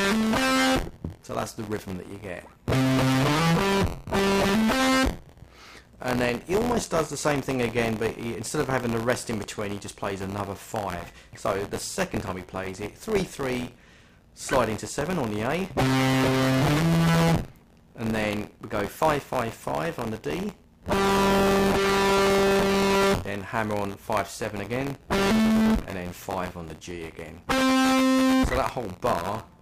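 Buffer tearing runs throughout. A robotic buzz near 86.1 Hz fits a 512-sample buffer. Each period carries a small slice of audio about 20 ms old, hard-joined.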